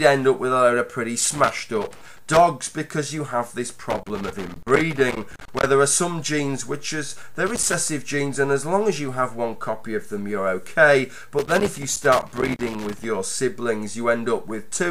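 Loose connector crackle breaks in four times: 1.21 to 2.40 s, 3.90 to 5.67 s, a short burst at 7.46 to 7.74 s, and 11.39 to 13.05 s. A worn or dirty contact is making and breaking as it shifts, chopping the signal. Unlike regular digital clicks or steady vinyl surface noise, the scratching comes in irregular clustered bursts with uneven spacing, as if something were being moved.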